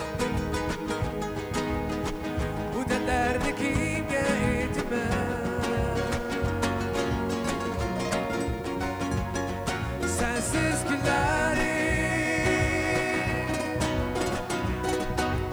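A constant, even hiss runs from the first moment to the last, sitting at roughly 30 dB below the signal and never changing character, with no crunch or grit riding on louder passages. That is low bit depth with dither: the audio has been reduced to very few amplitude steps, which fits 8-bit resolution, and dither noise was added before rounding, so the quantisation error became steady white noise instead of signal-dependent distortion.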